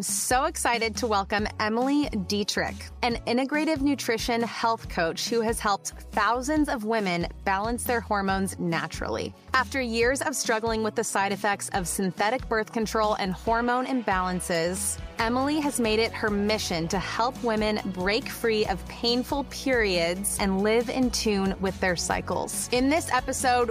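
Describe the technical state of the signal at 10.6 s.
At 10.6 s the signal is intact, with no audible fault at that moment.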